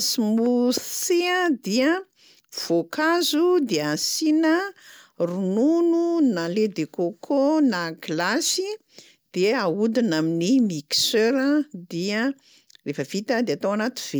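The speech recording shows no audible technical faults anywhere in its signal.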